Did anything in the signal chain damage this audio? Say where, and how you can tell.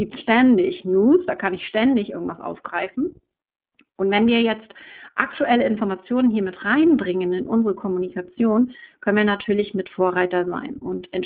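Yes, at the codec stage: the speech went through the iLBC codec, which fits its 15.2 kbps mode, coding each 20 ms frame independently. Throughout, nothing above 3.7 kHz survives, the band spans about 150 Hz to 3.5 kHz, and plainly audible roughness makes the speech sound synthetic.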